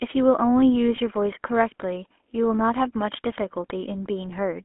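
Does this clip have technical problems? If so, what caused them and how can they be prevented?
Yes. The whole clip carries GSM full-rate codec damage: a buzzy, gravelly roughness with the band squeezed to roughly 250 Hz to 3.4 kHz, consistent with a 13 kbps full-rate coder rebuilding speech from a vocal-tract model and sparse pulses. To prevent it, route calls over a wideband codec instead.

There's also a lost GSM frame from 0.96 to 0.99 s, heard as a short metallic ring where the decoder replayed the last good frame, which fits a single 20 ms frame dropped. To prevent it, improve the radio link so frames arrive intact.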